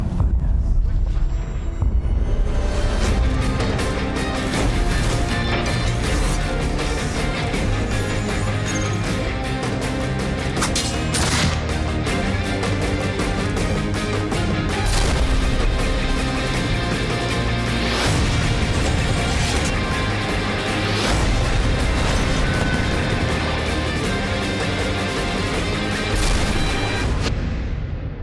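No technical faults can be heard anywhere in the recording, and the signal holds steady throughout.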